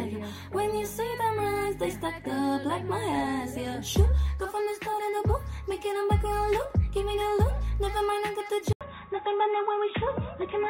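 At 8.73 s an 80 ms gap leads into dull, boxy sound with nothing above 3.8 kHz and faint new background noise, likely the input switched to a poorer device.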